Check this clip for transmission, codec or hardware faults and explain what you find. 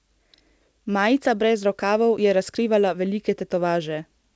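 Two timing faults are present, both from mismatched clocks across the call link.

Clock drift between sender and receiver runs through the whole clip. The sender's clock runs roughly 4 percent fast, so the receiver's jitter buffer keeps overfilling and the receiver must keep discarding audio.

Repeated timing corrections run from 0.04 to 4.24 s. The receiver keeps trimming short pieces, so the speech plays at 105 percent speed, heard, if at all, as slight hiccups or an uneven tempo. This happens over a call path with nothing above 8 kHz, which fits G.722 at 64 kbps.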